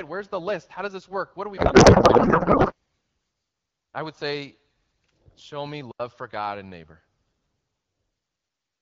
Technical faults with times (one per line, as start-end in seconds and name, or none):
1.57-2.74 codec payload misread
5.91-6.00 digital wireless dropout